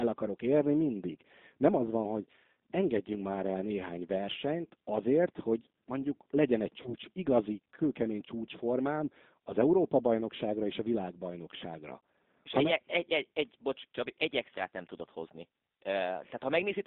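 G.729 codec damage runs through the whole speech clip. The 8 kbit/s G.729A coder rebuilds the voice from a vocal tract filter, pitch predictor and a few pulses per frame, confining it to roughly 150 Hz to 3.7 kHz and leaving it plainly rough and synthetic. VoIP packet loss concealed by the speech codec appears from 6.82 to 6.94 s, between "hogy mondjuk legyen egy" and "igazi kőkemény csúcsformám az". About 30 ms of audio is missing, which fits a single lost packet. The decoder extrapolates from its last pitch and filter with falling gain, giving a brief, fading smear that lingers until the frames recover.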